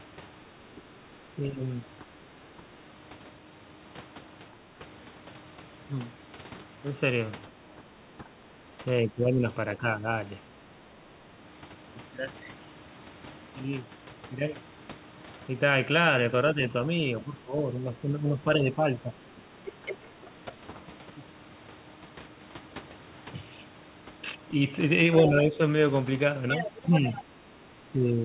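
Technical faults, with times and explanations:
0.52–2.77 s, 4.51–4.61 s, 7.77–10.63 s, 16.54–20.79 s and 25.26 s to the end: speech suppressed in double talk. The talker's level dips by about 10 dB, and by about 15 dB in the brief 4.51 s dip, in patches adding up to roughly 0.7 s, 1 s and 2 s in the longer spans. The likely cause is an echo canceller that cannot tell the near talker from loudspeaker echo while both sides speak, so it pulls everything down. On the waveform the envelope sags or notches mid-phrase. The spectrogram shows the whole band, already capped at 4 kHz by the G.711 call path, fading together.
19.67–20.29 s and 25.26–27.24 s: other side's voice leaking through. A second, fainter voice sits about 10 dB below the talker, likely loudspeaker playback that the echo canceller did not fully remove from the microphone. Here it overlaps the suppressed stretches, so the gated near speech and the residual far speech are heard together. 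On the spectrogram a separate set of harmonic traces runs alongside the talker's, weaker. The waveform shows low-level activity filling what should be gaps.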